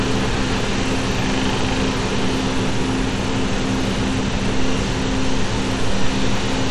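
From start to finish the audio carries damage that points to Bluetooth SBC compression as the likely cause. The sub-band coder has too few bits to share, which fits a rate of around 96 kbps, so the upper bands are starved and the rest coarsely quantised. The result is a plainly audible gritty, grainy edge with unsteady treble. A spectrogram shows nothing above 16.8 kHz, and the energy below that ceiling looks blotchy and flickering rather than smooth.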